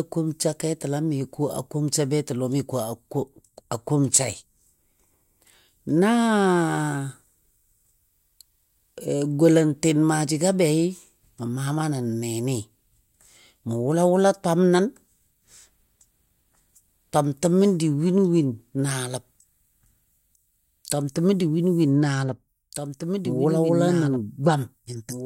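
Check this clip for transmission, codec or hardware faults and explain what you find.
One fault is present. From 22.73 s to the end there is a doubled audio track. A full-band copy of the speech runs about two seconds behind at about 5 dB lower, likely from a second, slower capture path. It starts abruptly. A spectrogram shows the same speech patterns twice, offset in time, with no decay smear.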